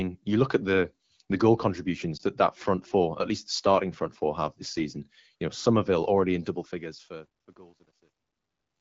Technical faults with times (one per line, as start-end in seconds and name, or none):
2.17-2.22 lost AMR speech frames
6.45-8.80 truncation distortion on a fade